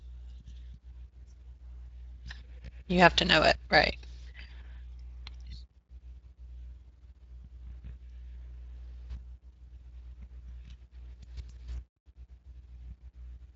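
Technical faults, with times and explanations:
Nothing stood out on listening to this speech.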